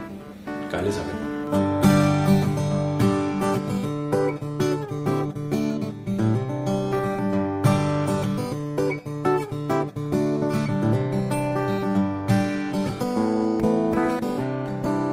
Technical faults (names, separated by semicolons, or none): none